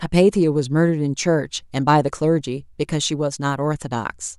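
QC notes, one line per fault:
No faults found in the speech clip. Nothing heard in it calls for a note.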